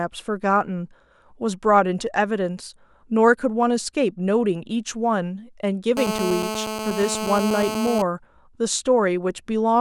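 From 5.97 s to 8.02 s, a GSM phone buzz sits under the speech: a nearby 2G handset on a call transmits bursts at 217 Hz, and the audio circuitry rectifies them into a steady, harsh, harmonic-rich rasp about 6 dB below the signal.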